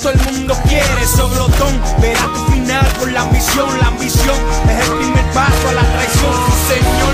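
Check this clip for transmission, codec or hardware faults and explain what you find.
No transmission, codec or hardware faults are audible anywhere in the clip.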